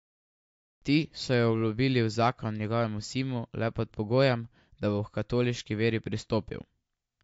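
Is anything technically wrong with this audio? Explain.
Yes. Throughout the speech there is audible MP3 compression, likely from encoding at a bitrate too low for the material, which fits something near 48 kbps. With too few bits to share out, the encoder drops everything above about 7.6 kHz and discards weaker frequency lines, which then flicker in and out between frames. The result is a dull, band-limited sound with a watery, swirling texture and smeared consonant attacks.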